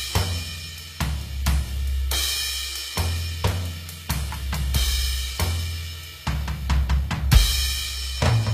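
From start to finish the music carries plainly audible codec damage, likely from HE-AAC compression at a low rate, which fits roughly 24 kbps. Only the lower spectrum is coded directly; the treble is regenerated by copying lower bands upward under a coarse envelope. The top end is synthetic, with harmonics misaligned across the crossover, giving cymbals and sibilant sounds a gritty, metallic edge. Nothing is present above 15.4 kHz.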